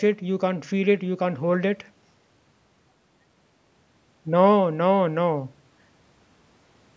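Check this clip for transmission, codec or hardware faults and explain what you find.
No transmission, codec or hardware faults can be heard in this speech. The call microphone processing is working as expected, trimming the lowest bass and leaving nothing above 8 kHz.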